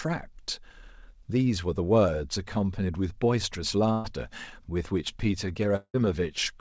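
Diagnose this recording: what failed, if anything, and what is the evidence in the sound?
The failure is at the network stage. A burst of packet loss runs from 3.92 to 4.06 s. The speech stops advancing there. The receiver fills about 120 ms by repeating the last sound and fading it, so a brief buzz or hiss replaces the speech. When the audio resumes, about 120 ms of speech is gone. A short run of consecutive packets never reached the decoder in time.

A second, longer break runs from 5.76 to 5.96 s. The last sound is stretched and fades for roughly 130 ms. Then about 50 ms of silence follows. About 180 ms of speech is missing when the audio returns. The cause is likely a long network dropout, where nothing arrived and concealment ran out. Outside the gaps, the G.722 call path leaves nothing above 8 kHz.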